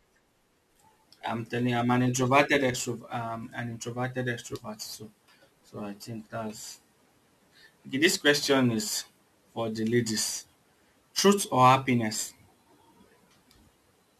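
From start to finish the speech carries a gritty, inharmonic fizz that rises with louder and brighter syllables, the mark of crude rate conversion. Samples were dropped by picking the nearest one rather than filtering, which fits a change from 48 kHz to 44.1 kHz. The resulting error sits only about 25 dB below the signal. Unlike a steady hiss, the fizz vanishes in pauses and clings to sibilants and loud peaks.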